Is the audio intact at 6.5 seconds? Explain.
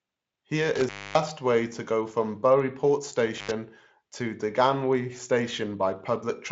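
Yes, the audio is intact at 6.5 seconds, with no fault at that moment.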